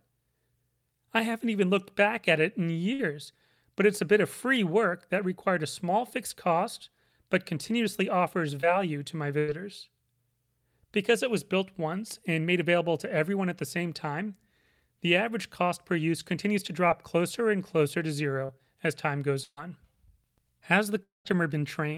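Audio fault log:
2.93–3.01 s and 9.39–9.50 s, burst of packet loss: about 60 ms and then 100 ms of speech never arrived in time, so the receiver stretched the last sound over the hole, fading it for roughly 55 and 93 ms, and carried on past the missing part. It is heard as a short held buzz or hiss and then a jump. On a spectrogram the harmonics run flat and dim, then the pattern changes abruptly. The waveform tapers before the cut.
8.61 s and 16.88 s, short concealed packet loss: each time about 20 ms failed to reach the decoder, and the receiver made up the gap by carrying the preceding sound forward before blending back into the real signal. The result is a brief smear or wobble lasting hardly a syllable fragment. A spectrogram shows a thin vertical slice where the harmonics go smooth and blurred. The waveform has a small kink with no true silence.
18.46–19.59 s, repeated packet loss (robotic sound): three separate holes fell within just over a second, about 180 ms missing in total, the longest about 134 ms. 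Each was patched by extending the last sound, so roughly 15% of this stretch is synthetic. The speech turns choppy. On a spectrogram smeared, frozen blocks of harmonics alternate with normal texture. The waveform shows repeated periodic chunks between genuine speech.
21.03–21.27 s, long network dropout: about 220 ms of audio went missing, most likely because the network briefly stopped delivering. The receiver continued the last sound as a decaying buzz or hiss, then left about 160 ms of silence before speech returned further on. A spectrogram shows energy smearing and fading into a blank column. The waveform thins to a flat line, then resumes abruptly.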